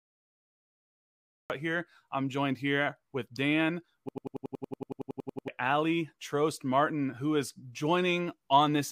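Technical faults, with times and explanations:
0.00–1.50 s, cut-off start: the clip opens on digital silence for the first 1.50 s, and the speech then begins abruptly at 1.50 s, already mid-sound, with no natural attack or fade-in. This is the signature of a recording or stream that started capturing late. Whatever preceded the cut point was never captured, so the first audible sound arrives partway through rather than from its onset.
4.09–5.48 s, system hang loop: one short slice of audio, 92.88 ms long, repeats identically 15 times at about 10.8 Hz, producing a rapid machine-gun stutter instead of continuous speech. This happens when the computer or driver stalls while the audio hardware keeps replaying the same ring buffer. The loop length fits a 4096-sample buffer, and roughly a second and a half of the original audio is lost during the hang.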